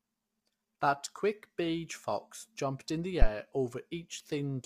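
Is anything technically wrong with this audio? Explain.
Yes. Throughout the speech, the audio was likely passed through low-delay AAC compression (AAC-ELD), at a rate the sound suggests is around 32 kbps. Coding so few bits per frame leaves plainly audible damage: voices turn rough and grainy, noise fills between harmonics, and the top band is lowered or synthetic.

From 3.22 to 3.27 s, just after "fox jumped in the", there is a phantom power thump. A supply was switched on or off on a live input, and the voltage step passed through the coupling capacitors. It sounds as a deep thump decaying within about 12 ms.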